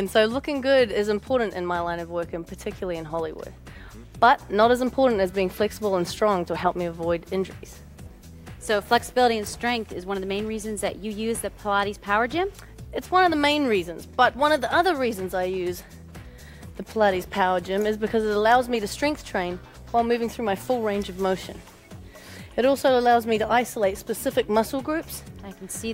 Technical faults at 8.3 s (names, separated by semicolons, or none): none